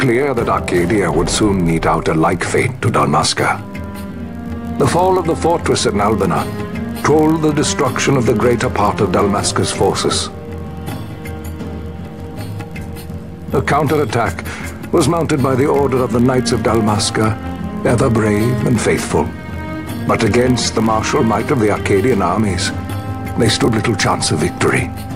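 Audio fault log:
Throughout, block size mismatch (padded): a steady low buzz near 46.9 Hz sits under all the audio, and playback runs only about 0.1% slow (0.999 times normal speed) with no audible pitch change. One stage hands over blocks slightly shorter than the next stage reads, so each block ends in a very short run of zeros. Those regular dropouts repeat at the block rate, which fits a 1024-sample read size.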